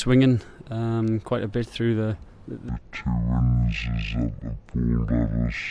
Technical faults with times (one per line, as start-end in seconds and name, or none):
2.69-5.71 wrong sample rate